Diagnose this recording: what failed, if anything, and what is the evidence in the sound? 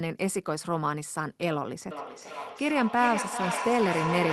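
Feedback echo between two devices (call processing): from 1.91 s, the speech returns roughly every 0.4 s at about −5 dB, because a second device's playback escapes this echo canceller. The spectrogram shows evenly spaced ghost copies.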